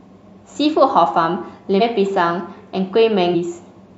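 At 1.77 to 1.82 s the speech jumps ahead. Compressed frames were skipped, about 150 ms of audio, which fits three 46.4 ms frames. At 3.30 to 3.36 s it happens again, roughly 200 ms.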